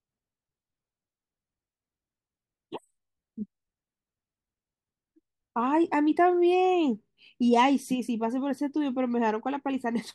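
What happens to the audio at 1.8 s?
Nothing goes wrong at 1.8 s: the speech carries on intact through that moment, with no dropout, click, distortion or other audible fault.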